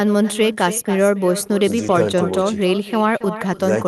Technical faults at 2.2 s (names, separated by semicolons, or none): echo with no canceller